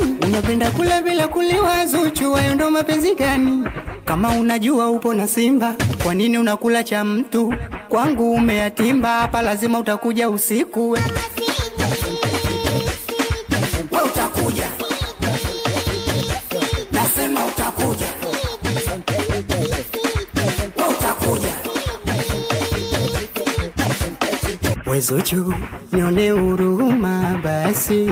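Nothing here stands out as a technical problem; it's a straightforward listen with no faults to point to.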